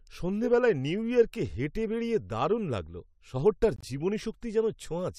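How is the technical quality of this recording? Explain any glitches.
The speech has one glitch, a corrupt frame muted at 3.76 to 3.85 s. Damaged compressed data was rejected by the decoder and replaced with silence. An abrupt hole of about 80 ms, fitting a few frames, cuts the sound, then resumes without shifting the timing.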